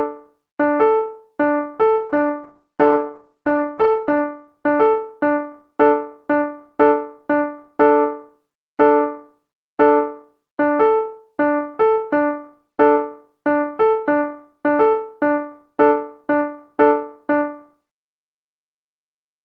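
From 1.99 s to 4.53 s a call bitrate drop takes hold: the encoder is starved of bits, which fits a fall from around 32 kbps to about 11 kbps. Coding turns coarse and rough, and the top end is cut from 20 kHz to 8 kHz, sounding muffled for about 2.2 s.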